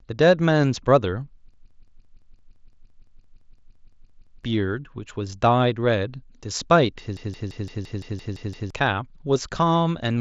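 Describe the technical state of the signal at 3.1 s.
At 3.1 s a system hang loop is under way, from 1.54 to 4.44 s. The system froze while the hardware kept replaying one 170.7 ms chunk, which fits a 4096-sample buffer, 17 times at 5.9 Hz. The resulting machine-gun stutter repeats identically, never fading or varying like concealment, and about three seconds of audio are lost.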